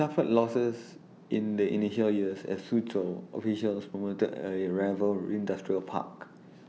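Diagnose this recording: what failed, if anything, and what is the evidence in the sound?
Nothing failed; the speech shows no audible faults.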